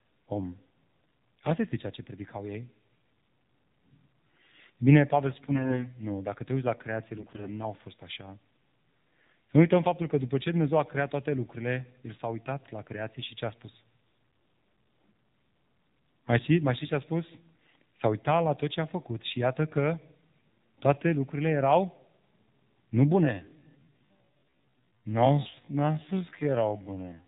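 Throughout, the speech sounds buzzy and synthetic, with nothing above 4 kHz. This is the AMR narrowband mobile codec: a vocal-tract model driven by sparse pulses, its damage plainly audible here and fitting a low rate around 7.4 kbps.

From 5.43 to 5.89 s, and again from 7.18 to 7.48 s, the voice keeps its pitch and level but turns hoarse, scratchy and gargly. These are AMR bit errors. Flipped low-priority bits misplace the excitation pulses and skew the finer pitch, gain and spectral values. The second burst has a heavier error rate, on the order of one bit in seven.

From 23.19 s to the end, the pace abruptly drops to about 0.56 times normal while the pitch holds, and the speech drags. This is a time-stretched section, likely software slowing the audio by repeating short pieces to preserve pitch.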